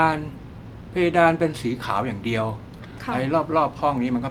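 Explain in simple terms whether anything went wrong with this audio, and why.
Nothing went wrong with this audio, as no technical fault can be heard anywhere in it.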